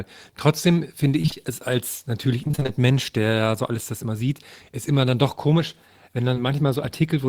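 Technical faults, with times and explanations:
1.21 to 1.51 s and 2.43 to 2.70 s, repeated packet loss (robotic sound): runs of gaps up to 25 ms, each patched by stretching the last sound, about half of each span, giving choppy speech with pieces missing rather than one smear.
6.34 s, short concealed packet loss: a single 20 ms hole filled by continuing the preceding sound and blending back, heard as one brief smear or wobble, not a choppy run.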